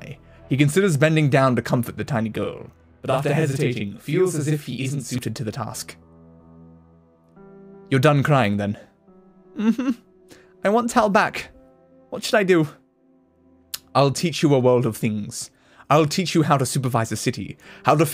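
From 2.43 to 5.18 s there is channel delay doubling. One channel runs 40 ms late. Summed to mono, it produces an equal-level doubled slap.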